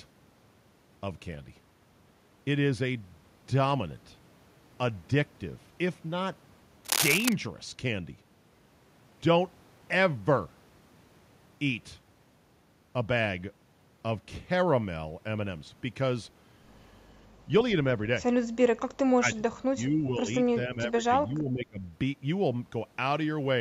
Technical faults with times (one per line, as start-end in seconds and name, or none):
6.85-7.33 cable scratch noise
19.07-19.39 speech suppressed in double talk
19.74-20.26 speech suppressed in double talk
20.67-21.82 speech suppressed in double talk